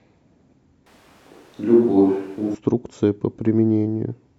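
A speech clip, with the sound switching abruptly to a roomy, hollow character with thinner bass from 0.87 s to 2.55 s, then snapping back. The level stays about the same, and room noise sits at roughly 35 dB below the speech. This is likely a switch to a distant microphone after the close microphone's signal dropped out.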